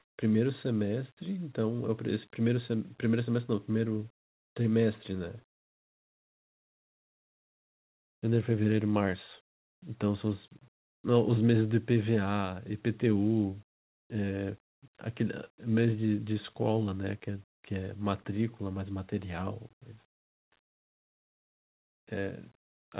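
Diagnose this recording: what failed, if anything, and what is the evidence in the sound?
Comfort noise in place of the background, at the call-processing stage. Pauses turn steady and featureless at 0–0.18 s (about 17 dB louder), then at 10.74–11.04, 13.76–14.1 and 20.1–20.52 s (about 10–15 dB quieter). Likely discontinuous transmission filling silence with synthetic noise.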